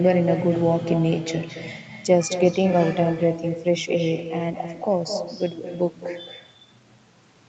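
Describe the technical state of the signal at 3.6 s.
At 3.6 s you're right in the middle of an echo with no canceller, and it runs the whole clip. The far end's loudspeaker feeds back into its mic, so the speech returns about a fifth of a second later, roughly 9 dB down, as a thinner, quieter shadow.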